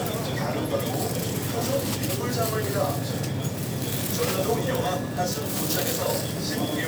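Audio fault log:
Nothing in the recording stood out as a problem on listening.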